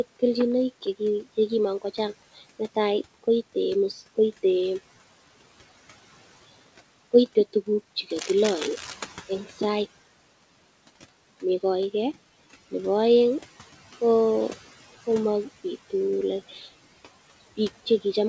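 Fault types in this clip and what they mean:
Noise suppressor artifacts: Throughout the clip, a frame-by-frame noise reducer attenuates the bands it classifies as steady background, by about 16 dB. The room noise, which sits about 19 dB below the speech, drops away in the pauses and comes back up underneath each phrase. This makes the background pump in step with the talking. The band-limited top end, with nothing above 8 kHz, fits a wideband call codec such as G.722.
Cable scratch noise: From 8.10 to 8.94 s, a dense, irregular burst of crackle and rustle rides over the audio at around 10 dB below the speech level. The texture is the kind produced by rapidly fluctuating contact resistance, most likely a worn connector, cable or control being moved during recording. It lasts under a second and is clearly separate from the steady room background.
Speech cut by the noise suppressor: At 16.49 to 16.67 s, the suppressor misclassifies part of the speech as noise and pulls it down along with the background, by about 8 dB at its deepest. 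The affected stretch totals roughly a fifth of a second. The low-level speech energy there sounds swallowed and faint compared with the surrounding speech, because the gain reduction meant for noise lands on wanted signal.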